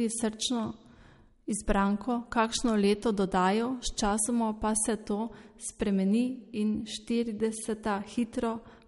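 From start to finish, the speech has most likely been through MP3 compression with too few bits to spare, which fits a low bitrate around 48 kbps. The encoder has cut the treble at 11.2 kHz, so nothing sounds above that, and quiet frequency lines keep dropping in and out between frames. The damage is plainly audible: a watery, swirling texture, metallic chirping on s sounds, and consonant onsets that smear rather than land crisply.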